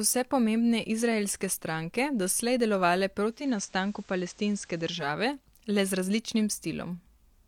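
At 3.23 s, just after "izraelske stranke doslej delovale", the receiver loses its digital signal and falls back to the station's FM broadcast, a case of digital radio blending to analogue. The crossfade takes about 0.27 s, and the speech drops by about 2 dB, and hiss rises to roughly 30 dB below the speech. At 5.16 s it blends back to digital.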